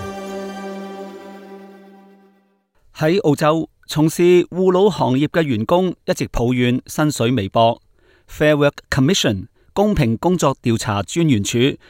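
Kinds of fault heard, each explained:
No faults turn up anywhere in this one, so there's nothing to list.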